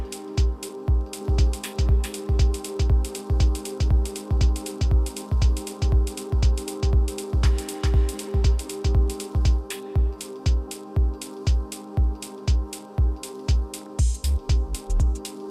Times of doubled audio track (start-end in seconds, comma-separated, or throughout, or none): 1.21-9.57